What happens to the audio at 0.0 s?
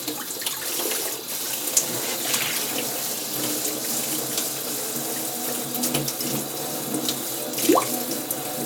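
Nothing goes wrong at 0.0 s; the everyday sound starts cleanly and is intact at that moment.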